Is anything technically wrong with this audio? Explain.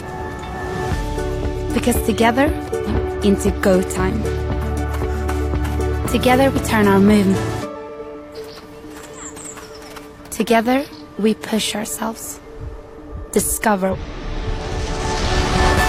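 Yes. Damaged data in a compressed stream, at 2.84–2.89, 7.29–7.35, 8.32–8.37 and 13.89–13.96 s: corrupted bytes break the decoder's frame sync, leaving short glitches while it resynchronises.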